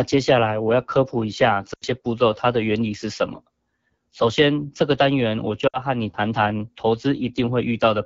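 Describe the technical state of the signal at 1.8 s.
At 1.8 s the signal sits inside a burst of lost AMR speech frames running from 1.73 to 1.85 s. Radio errors corrupted the frames so they failed their checksum, and the decoder filled the gap by reusing the last good pitch and vocal tract settings at steadily falling gain. The gap sounds like about 80 ms of missing audio, which fits four consecutive 20 ms frames. The sound drops to near silence within two frames, as wideband concealment does, then returns weak or rough for a moment.

Underneath this, the whole clip passes through the AMR wideband (HD Voice) codec at a low 8.85 kbit/s, one of its two lowest rates. The codec models speech below 6.4 kHz as pulses driving a vocal tract filter and fills 6.4 to 7 kHz with shaped noise. At this rate the model is coarse, so the speech around 1.8 s carries a plainly audible rough, raspy texture.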